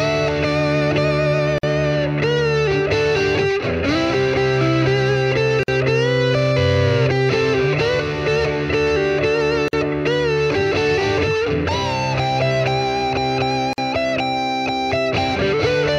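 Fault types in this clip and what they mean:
Gap at a join of encoded pieces: a short hole of silence, about 50 ms long, opens in otherwise continuous sound at 1.58, 5.63, 9.68 and 13.73 s, recurring every 4.0 s. Each gap has smeared edges, and the sound resumes exactly where it stopped. The regular spacing points to separately encoded 4-second pieces joined without removing each run's start-up delay and final-frame padding, leaving that silence at every join.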